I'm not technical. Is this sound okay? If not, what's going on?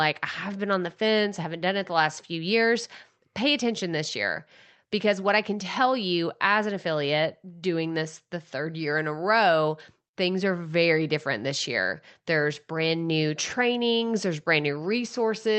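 Yes, nothing is wrong with this speech recording. It went through an ordinary internet call connection, which is why it sounds like a typical call, with the very highest tones above about 8 kHz left out.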